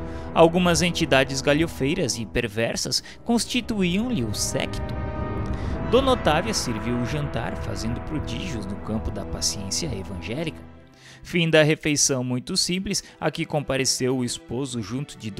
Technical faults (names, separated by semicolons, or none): dropped buffer (overrun)